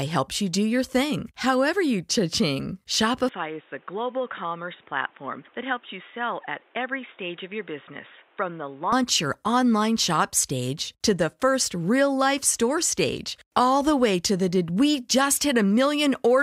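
At 3.29 s, just before "your online shop stage", the speech abruptly turns dull and boxy, with nothing above 3.8 kHz, a level drop of roughly 5 dB and new background noise sitting around 30 dB below the speech. There is no gap at the change. This is likely an input switched to a poorer device, such as a headset call profile. At 8.92 s the full bandwidth and original level return.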